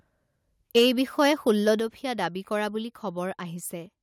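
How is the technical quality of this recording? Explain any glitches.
The recording has level-handling glitches early on: two bursts of clipping, each followed by a sudden drop in volume.

Microphone overload, 0.76–0.89 s and 1.2–1.72 s: peaks likely exceed the converter's limit by about 5 dB, then about 2 dB, flattening their tops into a harsh, crackling edge.

Microphone volume stepped down, at 0.79 s and 1.8 s: software likely cuts input gain by about 3 dB, then about 6 dB, so speech and background abruptly get quieter.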